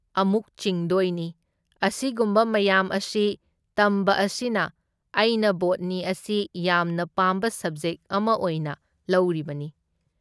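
No technical faults are audible.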